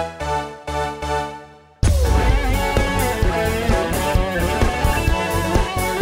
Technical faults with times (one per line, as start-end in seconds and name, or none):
0.00-6.01 sample clock jitter